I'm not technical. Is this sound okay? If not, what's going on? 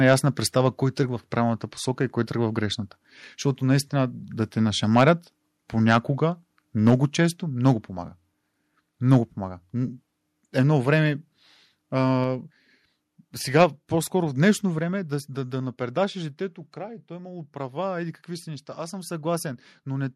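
No. There are two problems. First, microphone overload: the loudest moments turn harsh and crackly at 0.08 to 0.14 s, 4.96 to 5.10 s (right after "наистина да те"), 5.91 to 5.97 s, 6.87 to 6.93 s, 9.12 to 9.15 s and 13.60 to 13.64 s. This is likely because the microphone was set too loud, so the tops of those peaks got cut off.

Second, microphone volume stepped down: the sound suddenly gets quieter at 6.9 s (just before "често много помага"), 12.24 s, 13.64 s and 14.79 s (between "в днешно" and "е да да да"). The call software likely noticed the distortion and turned the microphone down in steps.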